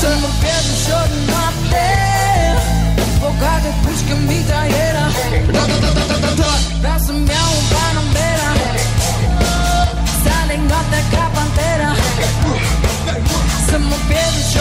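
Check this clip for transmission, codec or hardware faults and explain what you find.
Nothing stood out as a fault on listening.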